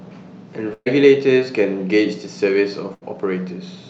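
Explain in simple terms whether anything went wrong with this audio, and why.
Yes, there are two bursts of packet loss, at 0.73 to 0.88 s and 2.94 to 3.03 s. The receiver stretched the last sound into a fading buzz or hiss, then jumped ahead, skipping about 120 ms and 80 ms of speech. That held tone is what sets it apart from a plain silent dropout.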